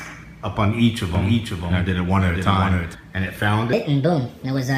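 From 1.15 s to 2.95 s there is a doubled audio track, likely because the sound was captured a second time through a slower path or because an edit left two copies out of step. A full-band copy trails the original by about half a second, around 5 dB quieter, so everything is heard twice. The repeat has no decay or room colour, and it cuts in and out abruptly at the edges of that span.

From 3.73 s to the end of the clip there is a section at the wrong speed, likely because an editor or player fitted this part to the wrong clock. It runs 1.43 times faster than it was recorded, and because speed and pitch move together, the sound jumps up by roughly seven semitones the instant the section begins. The final stretch sounds high and hurried compared with what comes before it.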